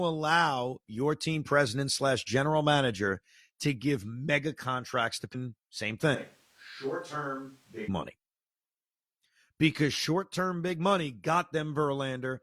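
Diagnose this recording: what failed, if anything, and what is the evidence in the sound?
The fault is a switch to a distant microphone, at the capture stage. From 6.15 s to 7.88 s the speech turns roomy and hollow and loses bass. The level drops by around 10 dB, and room noise rises to about 30 dB below the speech. Both changes are abrupt at each end. The likely cause is that the close microphone's feed dropped out, so for those 1.7 s the recording fell back to a farther microphone that picks up the room.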